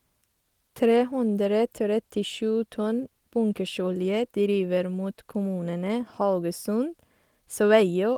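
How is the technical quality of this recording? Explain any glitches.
No glitches or technical faults can be heard here.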